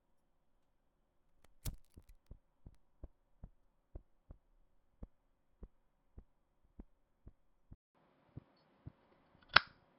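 At 7.75 s a 200 ms gap precedes duller, boxier sound capped near 5.3 kHz, roughly 5 dB different in level with new noise, likely an input switched to a poorer device.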